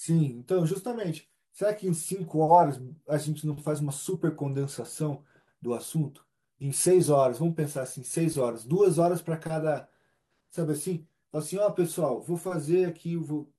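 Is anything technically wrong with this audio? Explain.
No, nothing technically wrong turns up in this speech recording; it's a fault-free clip with nothing here that needs fixing.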